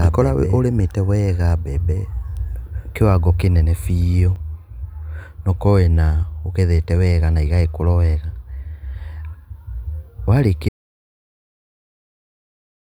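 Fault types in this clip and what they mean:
Doubled audio track: A second, equally loud copy of the speech runs about one and a half seconds behind the first. It is full-band and dry. It is already present at the start and cuts off abruptly at 4.36 s, after "ũrĩmĩte wega". A slower second capture path is the likely cause.
Audio dropout to silence: At 10.69 s the speech cuts out mid-flow. It falls to silence with no room tone, and this lasts to the end of the clip. Whatever was said in that span is lost. A likely cause is a lost input, such as a disconnected device or a failed link.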